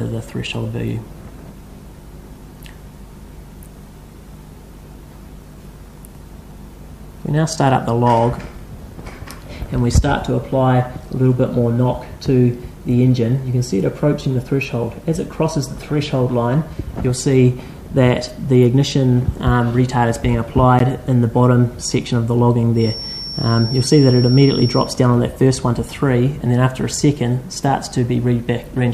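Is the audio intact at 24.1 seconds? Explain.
No. From 22.73 to 24.95 s a feedback whistle sits behind the sound, likely from a loudspeaker-to-microphone loop held just at the edge of feedback. It leaves a thin, steady 5.5 kHz tone about 10 dB below the signal, swelling and fading slowly in level.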